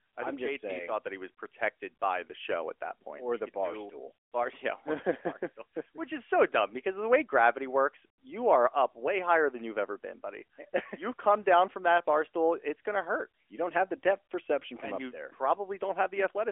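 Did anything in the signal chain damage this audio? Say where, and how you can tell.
No, nothing in the chain has damaged this speech clip. It was carried over the AMR narrowband mobile codec at 12.2 kbps, so it has the phone-line band of roughly 300 Hz to 3.4 kHz, with nothing above about 3.5 kHz and only light coding texture.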